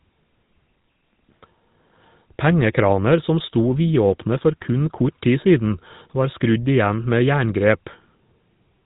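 Speech passed through a GSM full-rate codec, whose pulse-driven vocal-tract model (consistent with about 13 kbps) leaves a buzzy, gravelly roughness throughout and nothing above 3.8 kHz.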